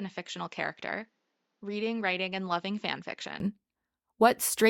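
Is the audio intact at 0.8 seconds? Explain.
No. From 0.0 to 3.4 s the sound is dull and band-limited, with nothing above 7.4 kHz. It is roughly 10 dB quieter and has faint added background noise. The input was likely switched to a poorer device, which passes a narrower band.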